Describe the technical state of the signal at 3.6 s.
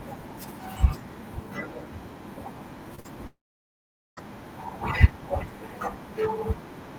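At 3.6 s you're in the middle of a long network dropout, running from about 3.27 to 4.19 s. The last bit of speech smears into a brief fading buzz, then it's roughly 0.8 s of dead silence, likely because no packets arrived and that audio was simply lost.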